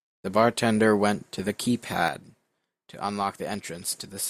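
One channel drops out at 2.08 s and stays gone to the end of the speech. The level falls abruptly by about 6 dB, likely from one side of a stereo pair going silent, so the mono sum keeps only half of the shared signal.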